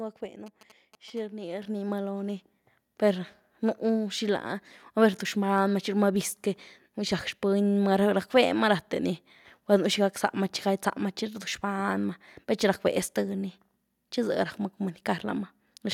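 From 0.46 to 1.19 s, a nearby 2G phone sends GSM signalling bursts that the audio circuit rectifies, giving a galloping dit-dit-dit of short 217 Hz buzzes about 15 dB below the speech. At 1.62 s, the microphone volume is stepped up by about 7 dB, so speech and background jump louder together in one step.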